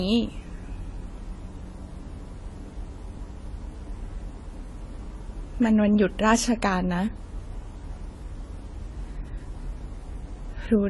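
From start to finish the speech stops dead at 11.5 kHz and carries two distinct textures of coding damage at the same time, the artefacts of each codec heard together. A single low-bitrate encode leaves one consistent texture, so this layering marks transcoding between lossy codecs. The likely cause is a Vorbis encode around 49 kbit/s re-encoded as AAC-LC around 32 kbit/s, with the second coder spending bits on the first one's errors.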